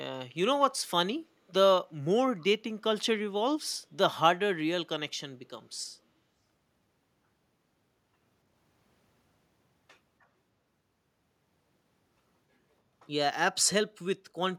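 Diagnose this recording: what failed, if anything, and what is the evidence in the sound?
Call processing is where this fails. At 2.41 to 2.45 s, a brief scrap of echo leak comes back: a delayed copy of the speech, arriving 288 ms after the original. It is very faint, roughly 30 dB below the speech, and lasts only a few tens of milliseconds. The likely cause is a far end playing the call on a loudspeaker. Its echo canceller briefly failed to subtract what its microphone picked up, and that residue was sent back down the line.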